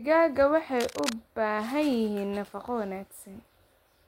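From about 0.78 s to 1.13 s there's a burst of cable scratch noise riding over the speech, a dense, ragged scratching and rustling that sits maybe 10 dB under the talker. The likely culprit is a worn cable or connector being moved, its contact resistance jumping around quickly and injecting those uneven crackles into the signal for that third of a second before things settle again.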